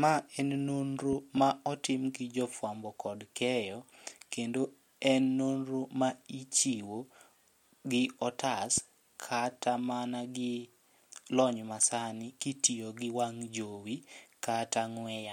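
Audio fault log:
1.13–1.39 s, loud pop: a voltage spike, likely from a plug, switch or static discharge, enters the signal after "en nonro", giving two sharp pops well above the speech, which continues beneath them into "ma otim gi jo".
8.78–8.80 s, loud pop: a brief electrical pulse, likely a switch or driver glitch, cuts in after "gi otas" as a single sharp pop well above the speech before "kata mana gi".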